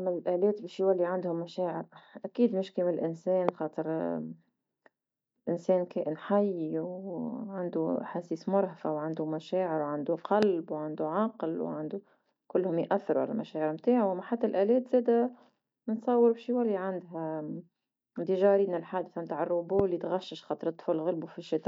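Loud pops at 3.49–3.51 s, 10.43–10.45 s (after "مرهفة وعندو مشاعر وعندو") and 19.79–19.82 s (before "تغشش خاطر"). Each is a single sharp thump about 15–20 dB above the speech, likely from a voltage glitch. Each shows as a full-height vertical spectrogram stripe and a tall waveform spike.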